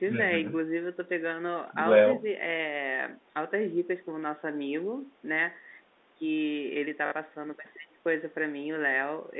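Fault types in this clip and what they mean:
Packet loss with last packet repeated: around 7.06 to 7.12 s, about 60 ms of audio goes missing and the receiver keeps replaying the last chunk it got. You hear a brief robotic stutter, which fits three lost 20 ms packets.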